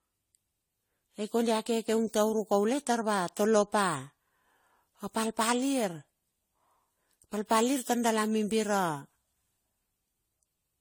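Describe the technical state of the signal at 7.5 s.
At 7.5 s the speech carries generation loss, present throughout the clip. It was likely decoded and re-encoded around seven times with AAC-LC, consistent with roughly 64 kbit/s, each pass requantising on a shifted frame grid. Noise and spectral holes accumulate, leaving a swirly, hollow, smeared sound with blurred consonant attacks.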